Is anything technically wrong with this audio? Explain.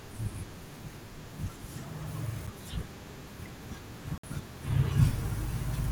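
Yes. The speech has two brief gaps where the sound cuts to silence and then resumes: a very short one at 2.47 s, lasting about 7 ms, and a longer one from 4.18 to 4.24 s, lasting about 56 ms. These are likely Bluetooth stalls, where delayed packets let the headphones' buffer run dry until the resent data arrived. The speech picks up where it stopped, or slightly later.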